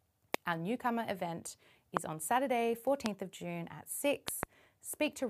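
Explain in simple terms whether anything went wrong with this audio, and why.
Loud pops cut in as sharp thumps at 0.34 to 0.36 s, at 1.97 to 1.99 s just after "newcomer event", at 3.06 to 3.08 s, and as a quick double pop between 4.28 and 4.45 s. Unlike a dropout, the speech keeps going underneath each pop. The likely cause is a sudden electrical jolt, such as a plug, a switch or static.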